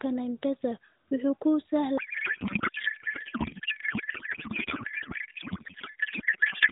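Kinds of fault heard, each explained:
Codec payload misread: from 1.98 s to the end, the AMR narrowband speech gives way to garbled noise and warble that barely tracks it. This fits octet-aligned frames being unpacked as bandwidth-efficient, shifting every field, so the decoder synthesises from the wrong parameters.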